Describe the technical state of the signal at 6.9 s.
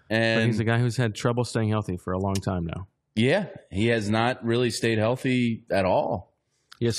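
At 6.9 s the player is still on a lower-bitrate rendition of the adaptive stream, a switch made at 3.61 s, likely because the connection slowed, and held to the end of the clip. The sound fits a drop from AAC-LC at around 96 kbit/s to HE-AAC near 24 kbit/s. In the speech, codec artefacts grow. The change is abrupt, with no gap.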